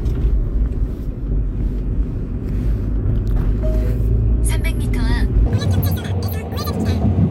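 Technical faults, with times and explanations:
5.46 to 7.30 s, section at the wrong speed: The final stretch plays about 1.9 times too fast. Pitch and pace jump up together, roughly ten semitones higher, so the sounds turn shrill and hurried. This likely comes from playback or editing against the wrong clock.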